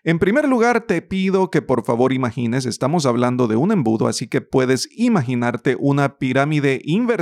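Just a stretch of speech here, and nothing technically wrong turns up anywhere in it.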